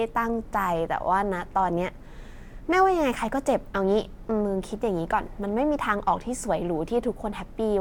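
Speech recording with no audible technical faults anywhere.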